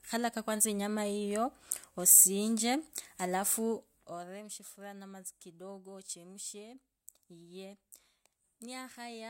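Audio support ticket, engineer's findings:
Zipper noise, 3.71 to 4.46 s: gain ramp applied in coarse steps without smoothing, around 100 a second, likely stepped once per buffer in the level control. Speech drops about 15 dB with rapid ticking riding on it throughout the fade.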